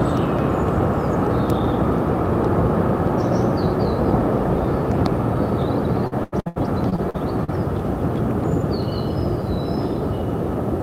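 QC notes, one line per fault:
6.07–7.50 s, repeated packet loss (robotic sound): eight dropouts land in quick succession across this stretch, the longest about 85 ms, with roughly a quarter of the span covered by concealment. Each hole is bridged by stretching the last short slice of audio, around 20 ms, rather than leaving silence. That recycled material repeats at a fixed rate, and with about 360 ms of real audio missing overall, the passage sounds choppy.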